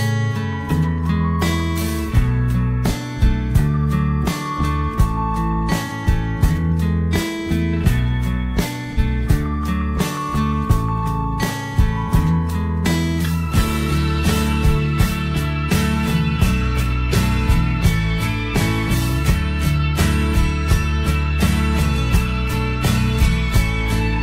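A single AAC frame appears to have gone missing twice, at 5.85 to 5.92 s and again at 8.92 to 8.99 s. Each is AAC frame loss with concealment, where the decoder patches the roughly 43 ms gap by re-using the last good spectrum with randomised phase. Both times the sound briefly smears into a noisy, phasey blur rather than dropping to silence, because each loss is too short for the concealment to fade out.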